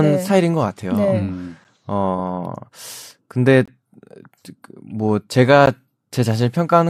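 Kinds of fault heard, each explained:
Gap between stream segments: the timestamps of neighbouring 2 s segments fail to meet, so silence fills each join, at 1.64 s, 3.66 to 3.68 s and 5.66 s, 8 to 22 ms long. The waveform drops abruptly to silence; spectrograms show thin, full-height blank stripes.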